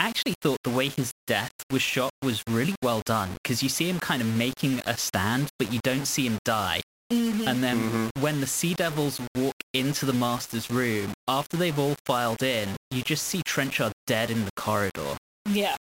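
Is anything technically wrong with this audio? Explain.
Yes. Throughout the speech, a grainy distortion tracks the signal, turning quiet passages gritty and sputtering or near-steady hiss where the sound is dense, with the error sitting only about 15 dB below the speech. The likely cause is low bit depth without dither: the audio was rounded to very few levels, which fits roughly 5 bits, and with no dither the rounding error stays tied to the signal instead of becoming smooth noise.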